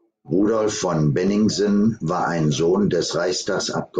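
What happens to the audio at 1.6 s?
At 1.6 s you're inside a run of buffer slips, likely clock drift buffer slips from two unsynced clocks, clicking about once a second from 0.28 to 3.28 s.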